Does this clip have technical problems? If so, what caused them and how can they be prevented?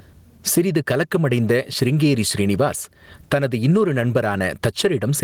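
Yes. Gain pumping runs through the whole speech clip, with the level swinging by around 20 dB. The likely cause is input gain set far too high, so a fast limiter keeps clamping down. Lower the input gain and use gentler compression.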